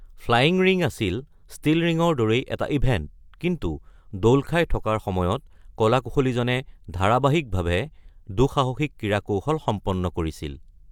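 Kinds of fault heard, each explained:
Nothing here stands out as a technical fault, so there's nothing to list for this speech recording.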